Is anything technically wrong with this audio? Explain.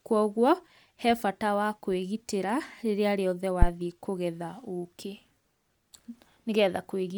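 Yes, there is one fault. From 3.62 to 3.69 s, a phantom power thump: a supply switching on or off on the live input sends a step through the coupling capacitors, producing a deep thud that dies within 14 ms, unlike a plosive.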